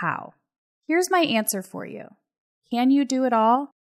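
No dropouts, clicks, distortion or other technical faults turn up anywhere in the speech.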